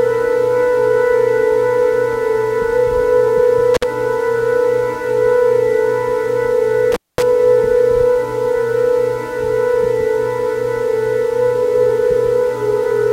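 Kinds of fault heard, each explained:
Intermittent contact: a loose plug or cable connection breaks for a moment, so the signal path opens and the sound drops out, with crackle where the contact makes and breaks. Here it happens twice: around 3.74 to 3.84 s, with an open gap of about 49 ms, and around 6.92 to 7.23 s, open for about 220 ms. On a waveform each shows as a sudden collapse to near-silence framed by jagged spikes. A spectrogram shows broadband vertical streaks at the edges and faint hiss across the gap.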